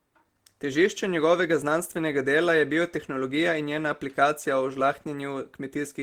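Nothing goes wrong anywhere in this bit of speech, so there's no fault to point to.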